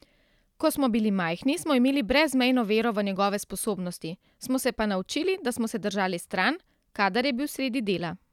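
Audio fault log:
No faults found; the speech track runs without any audible defect.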